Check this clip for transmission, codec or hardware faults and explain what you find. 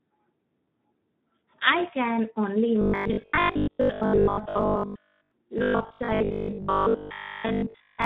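Two faults are audible: low-rate Speex codec damage across the whole clip, and robotic sound from repeated short buffers in two long stretches covering most of the clip.

Throughout, the speech sounds hoarse and grainy. This is the Speex codec under heavy strain. The CELP coder has too few bits to model the excitation, so the voice's fine structure becomes noise and the top band becomes a shaped, noise-like fill. The heavy damage is consistent with a low setting, around 8 kbps.

From 2.81 to 5.31 s and again from 5.58 to 8.04 s, the voice becomes a rigid, metallic buzz at 50 Hz that still roughly follows the speech. The likely cause is robotic sound from repeated short buffers. Audio arrives too seldom, so the receiver fills each gap by looping the last 20 ms. That loop length sets the 50 Hz drone, and most of the real audio in these stretches is skipped.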